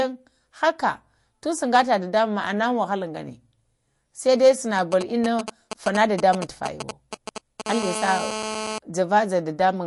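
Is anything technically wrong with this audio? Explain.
Yes, there are three problems. Throughout the clip the speech sounds watery and swirly, with smeared consonant attacks and no content above 11.3 kHz. The likely cause is MP3 compression at a bitrate that fits about 48 kbps: short of bits, the encoder drops weak frequency lines that flicker frame to frame and cuts the treble.

From 4.79 to 7.62 s a galloping dit-dit-dit of short buzzes sits roughly 5 dB below the speech. These are GSM signalling bursts: a nearby 2G phone sends brief groups of radio bursts while signalling, and the audio circuit rectifies them into 217 Hz buzzes.

From 7.66 to 8.78 s a hard, raspy, harmonic-rich GSM phone buzz runs steadily at 217 Hz, about 7 dB below the speech. A nearby 2G phone in a call transmits 217 bursts per second, and the circuit rectifies them into a continuous buzz unrelated to the speech.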